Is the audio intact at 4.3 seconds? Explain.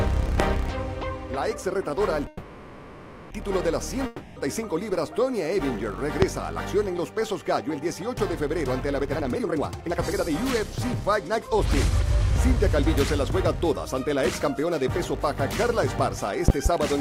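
No. A long network dropout runs from 4.06 to 4.38 s. The likely cause is that no audio reached the receiver for about 0.3 s, so that stretch was never played. Instead, the receiver carried the last sound forward across the whole 300 ms, which is heard as a buzz or hiss that fades rather than going silent. When audio returns at 4.38 s, it picks up further on, and the lost material is skipped entirely.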